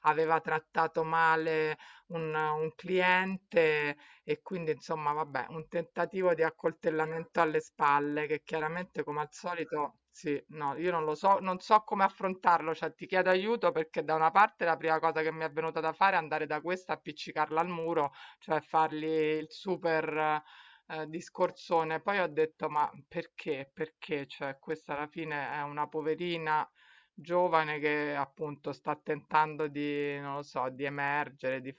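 From start to finish, the speech carries a rough buzz at 25 Hz. It follows the signal and drops away in pauses. The cause is a resampler restarted on every block. The audio was converted in separate 40 ms chunks, and the sound points to a change from 24 kHz to 16 kHz. At each chunk edge, the converter lacked the true neighbouring samples. So every boundary gets a small error, and together these errors fuse into a buzz at the block rate.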